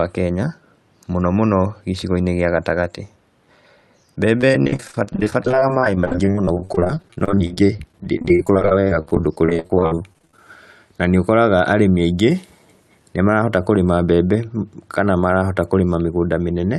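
Speech turns choppy and robotic from 4.37 s to 10.39 s, with a stuttering quality and small pieces of the sound dropping out over and over. This is repeated packet loss: over that six-second stretch the stream loses a packet every fraction of a second, with gaps up to 72 ms. Each hole is patched by stretching the previous sound, which accounts for roughly a quarter of that stretch and gives the synthetic texture. The call path itself rolls off the top end near 12 kHz.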